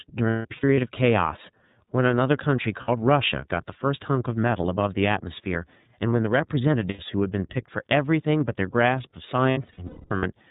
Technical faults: iLBC codec; lost iLBC frames

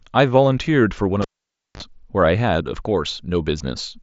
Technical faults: cable pulled and plugged in

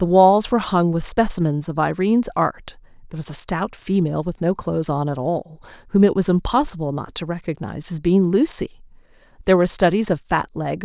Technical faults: none

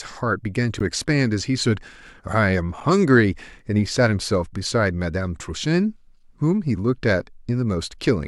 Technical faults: gap between stream segments

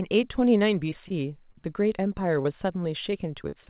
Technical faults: short concealed packet loss; short stall from a late packet; repeated packet loss (robotic sound)

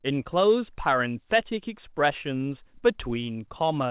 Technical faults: none

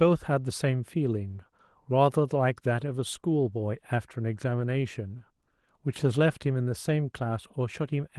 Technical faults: none

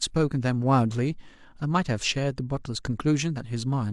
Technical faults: none

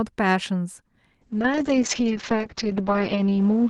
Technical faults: call bitrate drop

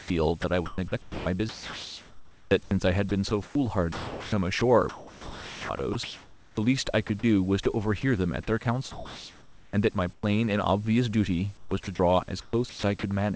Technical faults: sound chopped by the voice detector

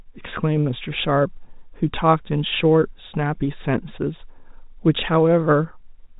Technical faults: none

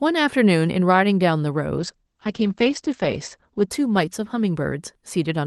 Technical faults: call bitrate drop

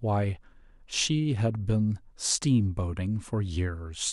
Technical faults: none

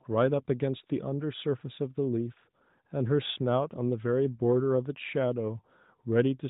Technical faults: none

